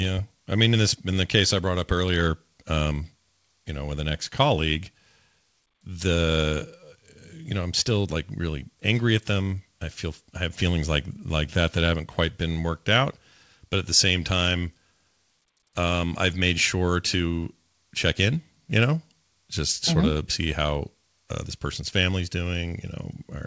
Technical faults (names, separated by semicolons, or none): none